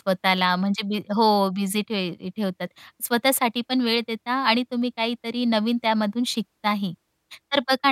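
Speech recording with no technical faults audible anywhere.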